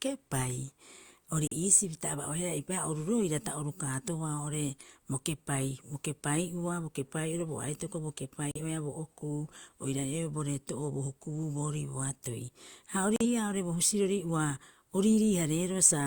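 At 1.47 s the speech cuts to silence for about 0.09 s. The same digital broadcast dropout returns at 8.51 s and again at 13.16 s, each hole equally brief. In each case the receiver lost the signal or rejected corrupt data and muted until clean frames resumed. The speech comes back, and whatever was broadcast during the gap is gone. Each gap fits a single lost frame of about 43 ms, plus the mute's recovery.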